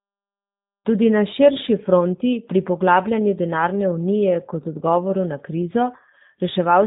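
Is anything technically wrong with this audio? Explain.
Yes. Throughout the speech the G.729 codec has left plainly audible damage. The sound points to a low-rate coder near 8 kbit/s that rebuilds each short frame from a vocal tract filter, a pitch predictor and a few pulses rather than the original waveform. The result is slightly rough, synthetic speech. A spectrogram shows a hard ceiling at 3.8 kHz with nothing above, and the waveform looks smoothed.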